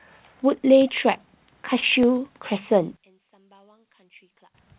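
A narrowband speech recording, band-limited by the call codec to nothing above 4 kHz as a G.711-style path would be, carries three faults. At 1.80 to 1.84 s, short concealed packet loss: about 20 ms of audio failed to arrive in time, and the receiver covered 18 ms of the hole by extending the preceding sound before blending back into the real signal, leaving a brief smeared, wobbly patch in the speech. At 2.03 s the output buffer briefly ran dry, an underrun with held sample: the converter froze on its last value for about 1.5 ms, so the waveform goes flat for an instant, and a similarly short stretch of live audio was lost in the meantime. From 2.97 to 4.55 s the audio drops by about 30 dB and turns faint, the likely cause being one channel inverted, where reversed polarity on one side makes the centred speech common to both channels cancel when they are summed to mono, leaving only their slight differences.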